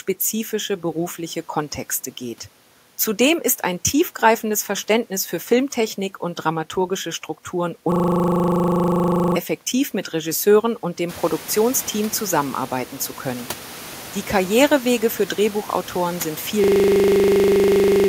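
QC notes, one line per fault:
7.92–9.36 s and 16.64–18.08 s, system hang loop: a steady 25 Hz buzz from one 40 ms slice repeating while the frozen system's ring buffer kept cycling.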